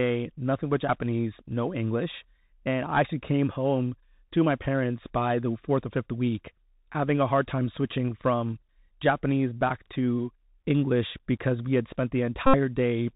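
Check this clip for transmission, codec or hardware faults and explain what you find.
Two faults are present: a narrowband Bluetooth headset codec across the whole clip, and a short run of repeated headset packets near the end.

Bluetooth CVSD headset codec, throughout: the speech is plainly damaged, with nothing above 4 kHz, scratchy s sounds, and a granular hiss beneath it. CVSD sends one up-or-down bit per sample, consistent with a 64 kbps link, and its adaptive step lags loud high sounds. That grainy slope-overload texture distinguishes it from a filtered or transform-coded narrowband line.

Bluetooth headset packet repeated, 12.47 to 12.56 s: a steady buzz near 267 Hz replaces the speech. Voice packets were lost, about 70 ms' worth, which points to roughly 19 packets, and the chip replayed the last good packet every 3.75 ms. The result is a pitched buzz rather than the silence of a plain dropout.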